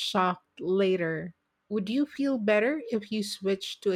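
Nothing goes wrong anywhere in this short bit of speech, so there's no technical fault to point to.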